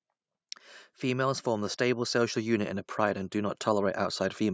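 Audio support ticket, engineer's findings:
Automatic gain rising, 1.01 to 4.48 s: speech and background swell together by about 8 dB as AGC slowly raises gain on a quiet input; call-processing band limit of 8 kHz.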